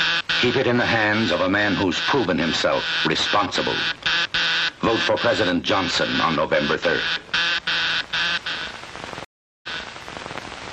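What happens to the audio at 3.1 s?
Nothing goes wrong at 3.1 s; the audio runs through that moment intact, with no dropout, click, glitch or other fault to be heard.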